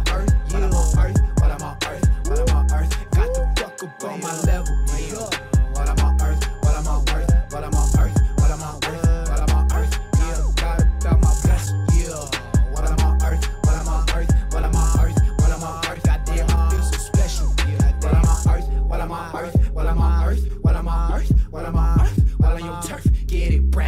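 No technical faults can be heard anywhere in the recording; the signal holds steady throughout without any disturbance to its level, timing or continuity.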